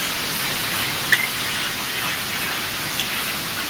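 At 1.12 to 1.14 s the input was likely driven too hard, about 16 dB past the converter's ceiling, causing microphone overload. Around a fifth of the samples in that burst are flattened at the limit, so the loudest speech peak gets a harsh, crackling edge.

At 1.14 s, right after that peak, the software likely cut the device's input gain in one step of about 2 dB, a microphone volume stepped down. Speech and background together drop slightly but abruptly in level from that point.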